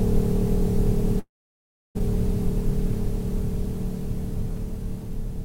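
At 1.19 s the music stops arriving and the receiver carries the last bit of sound forward as a buzzy tail that fades out quickly. From there it's silence for about 0.68 s until the music returns at 1.97 s, jumping ahead with roughly 0.76 s of material simply gone. That pattern of a stretched, fading tail, then dead air, then a resume past the gap is most likely a long network dropout.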